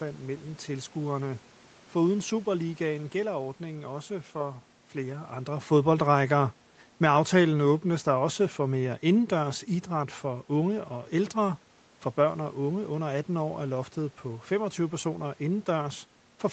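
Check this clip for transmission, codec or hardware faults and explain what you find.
One fault stands out in this speech. From 6.89 to 9.62 s, just after "for flere andre fodboldrækker" and before "idræt for unge og", the automatic gain falls. The gain control judged the input too loud, or its background noise too strong, and eased its gain down by about 3 dB. The room background sinks along with the voice, which shows it is not a talker moving back from the microphone.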